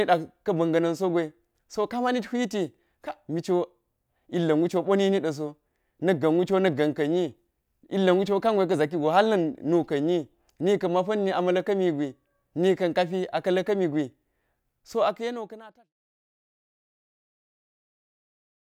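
No technical faults in this speech recording; the level eases down in a deliberate editorial fade-out from around 14.5 s to 15.9 s, with no click or hard edge.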